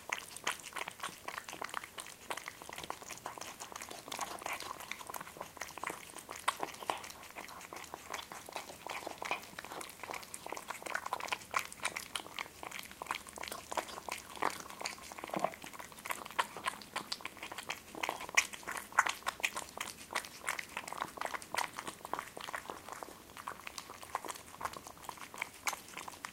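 A recording of everyday sounds, and nothing is technically wrong with it, so there are no times or causes to give.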